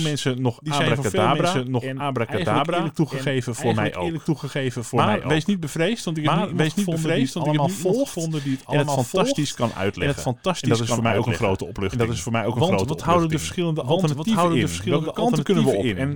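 Throughout, a doubled audio track is heard. A dry, full-band copy of the speech trails about one and a half seconds behind at roughly equal level, likely from a slower second capture path or an edit holding two out-of-step copies. On a spectrogram, every syllable pattern reappears, shifted right.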